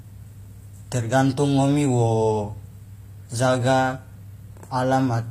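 From start to finish the speech carries plainly audible codec damage, most likely HE-AAC compression at a low bitrate, around 24 kbps. Nothing is present above about 15.4 kHz. Below that, the treble sounds synthetic, because it has been rebuilt from copied lower bands rather than coded directly. The copied harmonics do not line up with the real ones, so s sounds come out gritty and lispy, with a metallic edge.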